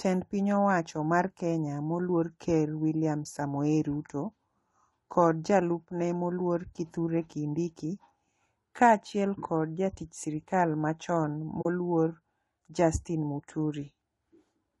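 Throughout, likely low-delay AAC compression at a low bitrate, fitting about 32 kbps, smears the speech harmonics, so the voice sounds plainly rough and grainy. From 11.61 to 11.66 s, just after "kod jatich sirikal machon", AAC frame loss with muting zeroes about 40 ms, leaving a soft-edged hole that fades out and in.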